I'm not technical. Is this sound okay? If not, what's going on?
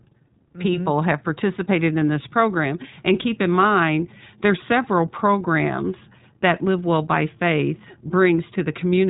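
No. Throughout the clip the speech sounds thin, slightly rough and robotic, as if heard over an old phone line. That comes from the iLBC codec, a phone-call compressor that rebuilds the voice in 20 ms slices and discards everything above about 3.8 kHz.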